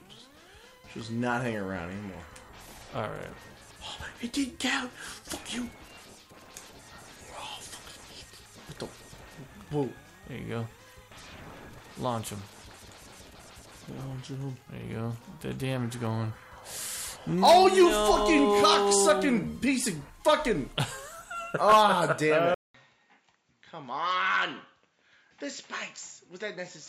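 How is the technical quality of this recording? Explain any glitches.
The recording has two faults: a stretch of timecode bleed and a late change of input device.

From 7.39 to 12.42 s, timecode bleed from a nearby track or cable leaks into the audio. The code runs at 30 frames per second and flips between tones around 1 and 2 kHz, producing a faint, steady chirping warble well below the main sound.

At 22.54 s the input was likely switched to a poorer device. There is a 200 ms silence, and then the sound runs to the end with nothing above 7.6 kHz. It is duller, roughly 10 dB quieter, and carries faint new background noise.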